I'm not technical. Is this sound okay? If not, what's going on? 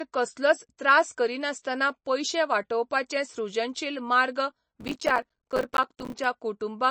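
No. The whole clip sounds dull and plainly watery, with nothing above about 8.3 kHz. This is likely MP3 compression. The file was squeezed too hard, so the encoder cut off the treble and dropped quieter detail. That leaves a swirly, smeared quality.

From 4.8 to 6.2 s, right after "सृजनशील मार्ग", there is processor overload crackle. The computer fell behind and missed many tiny audio deadlines in a row. Each miss left a short silent gap, and together they sound like gritty tearing.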